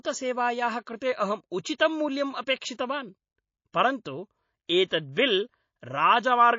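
Speech clip with plainly audible watery, swirly coding damage throughout, likely MP3 compression at a low bitrate, consistent with something like 32 kbps. Around 4.89 to 4.91 s there's pre-echo: a hiss about 15 dB up smears 27 ms ahead of an attack. That fits a long 72 ms transform window with no switch to short blocks.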